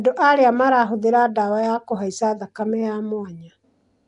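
Throughout, the speech was likely coded with Nellymoser compression, which fills starved bands with noise, leaving a rough, hissy, underwater smear with nothing above 10.6 kHz.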